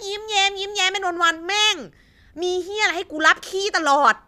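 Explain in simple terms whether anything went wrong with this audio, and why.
Nothing went wrong with this speech recording. No faults can be heard anywhere in it.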